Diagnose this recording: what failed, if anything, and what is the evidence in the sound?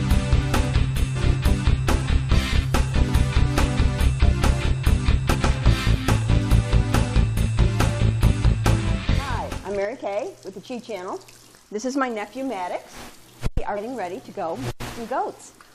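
Codec stage: damaged data in the compressed stream gives short blips at 1.15 s, 5.33–5.35 s and 13.76–13.78 s, where the decoder misreads corrupted frames and resynchronises.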